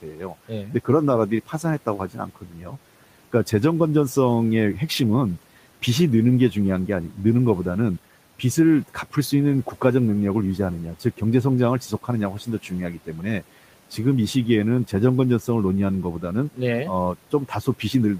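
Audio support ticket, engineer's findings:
Speech cut by the noise suppressor at 0.02–0.88 s, 1.46–2.77 s, 11.9–13.43 s and 17.15–18.19 s. Suppressor misreads soft consonants and word endings as noise and pulls them down with the background, by about 10–12 dB at worst. Room noise, about 23 dB below speech, is part of the recording.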